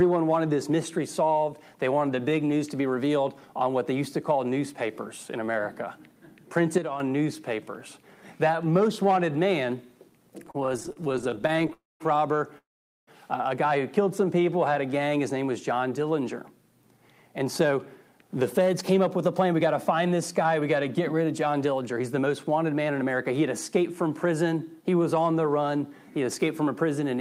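At 6.78 s the sound and its background noise drop together by about 7 dB in a single step, with no ramp. This is a sudden gain jump, likely a digital gain setting applied instantly rather than faded in. The level stays down through 7.0 s.

From 10.43 s to 11.73 s there is repeated stalling (stutter). The jitter buffer kept running dry, and the receiver patched 34 brief holes, none longer than 34 ms, by continuing the previous sound. Nothing is lost, but about 0.4 s of filler, roughly 31% of that stretch, makes the audio drag and catch.

Two call audio freezes follow. At 11.73 s a 268 ms hold begins, about 190 ms of it silent. At 12.58 s comes a longer 493 ms hold, about 450 ms of it silent. Both are likely late-arriving packets. Playback resumes where it stopped, so the audio gains delay and loses nothing.

Between 14.04 s and 15.10 s a jitter buffer slow-down stretches the audio to about 91% speed at unchanged pitch. 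Repeated pitch periods add about 100 ms so the buffer can rebuild its reserve, and sounds in that stretch come out drawn-out.

A jitter buffer speed-up runs from 16.83 s to 22.27 s at about 106% speed. Short pitch-period cuts remove around 0.4 s to shed excess buffered delay, so the audio sounds slightly hurried while pitch holds. A second, sharper speed-up at 23.77–24.33 s runs at about 111%, trimming about 70 ms.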